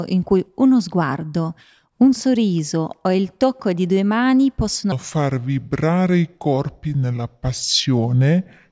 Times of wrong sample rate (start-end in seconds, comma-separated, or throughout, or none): 4.92-8.72